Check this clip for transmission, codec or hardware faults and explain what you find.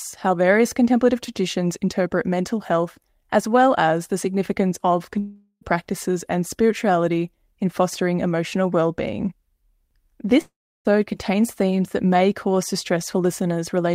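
Two gaps break the speech, at 5.19 to 5.63 s and at 10.41 to 10.87 s. Each lasts under half a second. The last sound carries on as a fading buzz, then goes quiet: briefly in the first gap, for about a third of a second in the second. The speech then resumes further on, with the missing part simply gone. The likely cause is a long network dropout. The receiver filled the hole by extending old sound until it ran out.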